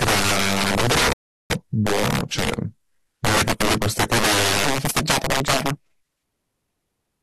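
Throughout the speech, integer overflow: gain pushed about 15 dB too hot wraps the loudest peaks, roughly 7 percent of samples, to the opposite sign, giving violent cracks far sharper than ordinary clipping. From 1.13 to 1.50 s a rebuffering stall drops to silence, then resumes exactly where it stopped, adding 370 ms without losing any material, unlike a dropout. From 4.65 s to the end, the speech runs 1.36 times fast and about five semitones high, most likely a section at the wrong speed played against the wrong clock, with pitch and tempo rising together.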